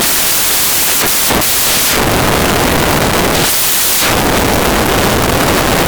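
Speech rendered as loud broadband noise throughout: samples built from the wrong bytes, their low bits misread as high, unlike clipping.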